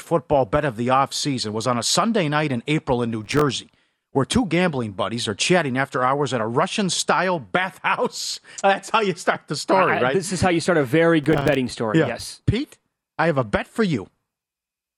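Processor overload crackle breaks up the speech from 3.24 to 3.41 s and again from 11.24 to 11.56 s. Audio buffers of a few milliseconds miss their deadlines repeatedly and drop to silence, giving a gritty tearing. The waveform shows clusters of flat gaps, and the spectrogram shows vertical broadband streaks.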